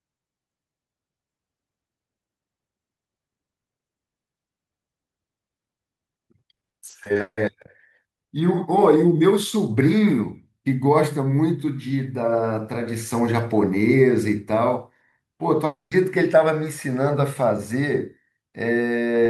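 From 6.71 to 7.39 s the speech turns choppy: repeated packet loss (robotic sound). Audio kept going missing in quick succession, and each hole was filled by extending the last sound, so speech flickers between real fragments and synthetic buzz. About 300 ms of the span, roughly 44%, is concealed, with the longest hole at 160 ms. Unlike a single dropout, real speech keeps surfacing between the gaps instead of giving way to silence.

At 15.65 s the speech breaks off in one continuous gap lasting until 15.93 s. The final sound smears into a brief fading buzz, then about 150 ms of silence follows, and speech resumes with roughly 260 ms lost. This points to a long network dropout as the likely cause. What sets it apart from the earlier choppy stretch is that there is only one interruption, the concealment dies away into silence, and no fragments of speech come through during the gap.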